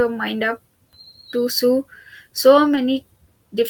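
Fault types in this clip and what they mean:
Short concealed packet loss: about 20 ms of the call arrived too late for the decoder, so the receiver extended the preceding speech to cover the gap and then blended back in, leaving a brief smear or wobble near 2.75 s, just after "to so so".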